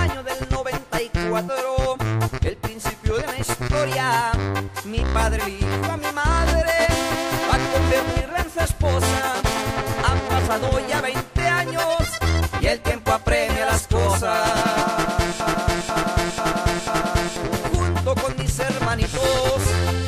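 At 15.40 s a broken-record loop begins and runs until 17.36 s: a fragment of about 0.49 s repeats four times back to back, identical each time, so the sound stutters in place and whatever should have played there is lost. The likely cause is a player, encoder or stream that stalled and kept resending its last held fragment. On a waveform or spectrogram the span shows four identical blocks tiled at 0.49 s intervals.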